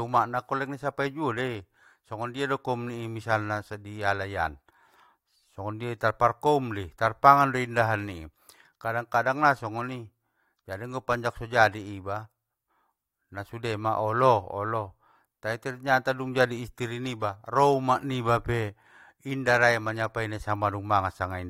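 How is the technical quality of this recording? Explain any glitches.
Nothing stood out on listening to this recording, and there are no glitches to explain.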